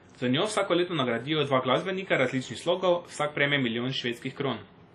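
From start to finish the speech carries a ringing, washy smear and a hiss that swells and fades with the signal, and nothing is heard above 15.5 kHz. The damage is heavy. It is likely WMA compression at a low bitrate, around 32 kbps: long transform blocks spread quantisation noise over tens of milliseconds and zero weak spectral lines. A denoiser's musical noise sits in the pauses; this hiss rides on the sound itself.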